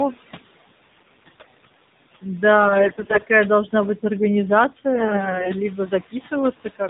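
Noise suppressor artifacts run through the whole speech clip: the suppressor pulls the room noise, which sits about 18 dB below the speech, down by about 17 dB between phrases and lets it swell back under them. It does this band by band and frame by frame.

AMR narrowband mobile codec damage is also present from start to finish and is plainly audible. Nothing above 4 kHz survives, so the voice sounds boxed-in and dull. The buzzy, synthetic texture comes from rebuilding each sound with a vocal-tract model driven by only a handful of pulses, which points to one of the lower AMR-NB modes, around 7.4 kbps. The background noise turns into a swirling warble as it passes through the codec.

AMR bit errors hit three stretches, from 0.98 to 1.72 s, 2.64 to 3.23 s and 4.95 to 5.52 s, and each stretch sounds rougher than the one before. These bursts suggest a weak radio link that corrupted several percent of the less-protected bits, roughly a tenth by the last burst, while the frames were still accepted. 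The misplaced pulses and slightly wrong gain and spectral values turn the voice hoarse, scratchy and gargly, although its pitch and loudness stay roughly in place.

Speech cut by the noise suppressor affects the last second, from 6.11 to 6.32 s and from 6.56 to 6.80 s. In these spots the suppressor mistook parts of the speech for background and pushed them down by up to about 16 dB, so soft sounds and word endings come across swallowed and faint.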